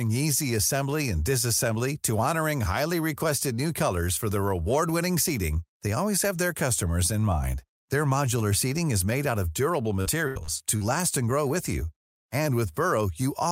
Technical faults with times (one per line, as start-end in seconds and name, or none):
10.01-10.82 repeated packet loss (robotic sound)